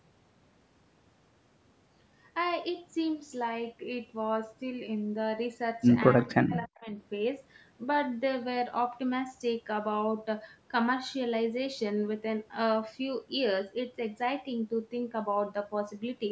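From 6.2 s to 6.89 s, the speech sinks sharply. At its deepest it falls by about 30 dB. The dip lasts roughly seven tenths of a second, then the level returns. This is speech suppressed in double talk, likely caused by the call's echo canceller. Both ends were talking at once. It could not tell the near talker from the loudspeaker echo, so it turned both down. Throughout, the band stops at 8 kHz, from the call's microphone processing.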